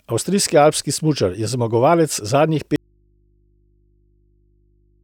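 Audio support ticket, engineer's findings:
Speech cuts out abruptly at 2.76 s and never returns; only mains hum remains through the end, roughly 40 dB below the signal. Audio dropout to a faint residue. Likely a lost source feed with the downstream input left open and live.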